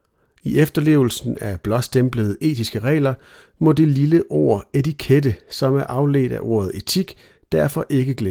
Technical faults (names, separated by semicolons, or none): none